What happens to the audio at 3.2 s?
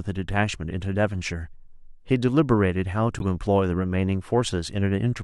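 A corrupt frame was decoded, from 3.19 to 3.22 s. Bits in the compressed speech stream were flipped, and the decoder played the damaged data anyway. Misread gains and codes put energy at the wrong frequencies. The span is about 30 ms, which points to a few consecutive frames being hit. It is heard as a brief chirpy burst of noise, peaking at roughly -15 dBFS.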